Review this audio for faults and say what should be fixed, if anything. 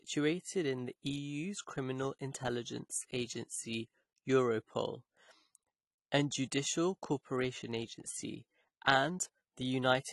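AAC compression damage runs throughout the speech. Nothing is heard above 12 kHz, so the top octave is missing and the speech sounds dull and band-limited. The coding damage is plainly audible, and the narrow bandwidth fits an AAC-LC encoder at a low bitrate, likely around 32 kbps. At that rate the encoder quantises each frame's spectral lines too coarsely and sacrifices the highs first to save bits. To prevent this, encode from the original source at a higher AAC bitrate, or keep a lossless master for delivery.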